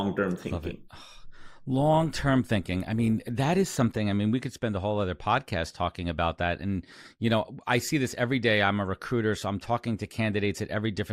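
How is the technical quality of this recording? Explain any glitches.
The opening of the recording is degraded, then it clears up. From 0.0 to 4.0 s there is an adaptive stream starting at a low bitrate. The player began on a cheap version of the stream so playback could start fast. It switched to a richer version once it had gauged the connection. Until 4.0 s the speech sounds dull and smeared, with thin, artificial treble and stronger codec artefacts. The sound fits Opus at around 32 kbit/s. Then quality jumps, with no gap, to what fits 64 kbit/s.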